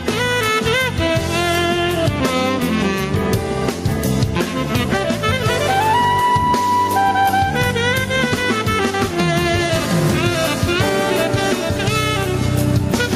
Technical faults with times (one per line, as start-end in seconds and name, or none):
0.00-13.15 gain pumping